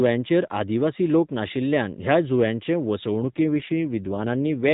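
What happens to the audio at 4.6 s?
At 4.6 s the speech sounds rougher, buzzier and more synthetic, with no gap and no loss of bandwidth. This is an AMR rate drop running from 3.24 s to the end of the clip. The codec has fewer bits for the voice, which fits a switch from 12.2 to 5.9 kbps.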